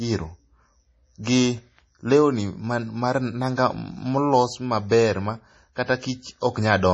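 From start to finish the speech has a watery, swirly texture with smeared consonant onsets and nothing above about 10.2 kHz. That's heavy MP3 compression, likely at a bitrate around 32 kbps, where the encoder drops the treble and toggles weak frequency lines frame to frame.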